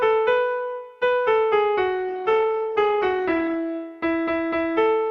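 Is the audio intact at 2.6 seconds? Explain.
No, 2.6 seconds falls inside a call bitrate drop that runs from about 2.09 to 3.63 s. The bandwidth estimate sagged, so the encoder got squeezed hard, with the coarseness pointing to something like 48 kbps falling to around 13 kbps. With fewer bits it codes the sound more crudely and trims the top end, pulling the cut-off from 20 kHz down to 12 kHz. It sounds rougher and duller until the rate climbs back.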